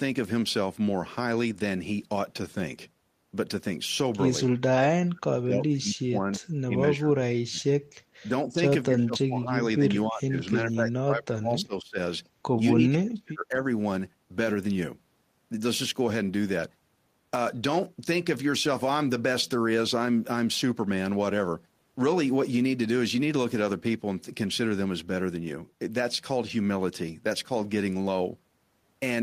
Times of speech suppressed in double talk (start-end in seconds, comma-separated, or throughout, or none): 4.45-4.49, 4.78-6.42, 6.67-7.69, 8.28-9.82, 10.07-11.98, 12.73-13.66